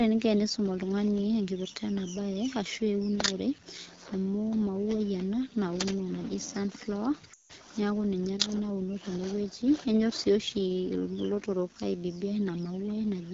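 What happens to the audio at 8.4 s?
At 8.4 s, as throughout, the speech runs through an AMR wideband (HD Voice) codec at a low mode, which fits 8.85 kbit/s, so the speech is plainly rough and raspy.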